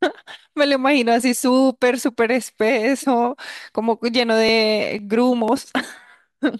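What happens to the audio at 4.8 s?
At 4.8 s the speech falls inside a run of periodic USB or driver dropouts, from 2.99 to 5.98 s. About every 0.5 s roughly a millisecond of audio is skipped, giving regular ticks. A spectrogram shows evenly spaced thin vertical broadband lines, and the waveform shows matching jumps.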